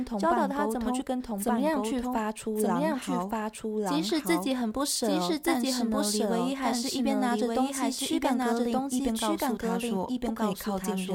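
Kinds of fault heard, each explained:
Doubled audio track: throughout the clip, the speech is heard twice, with a second full-band copy trailing the first by about a second at roughly the same loudness. The copy carries no decay or room colour, which rules out a natural echo. It is likely the same signal captured a second time through a slower path, or two out-of-step copies held together by an edit.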